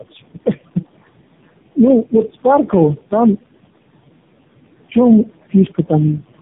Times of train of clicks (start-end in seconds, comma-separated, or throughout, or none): none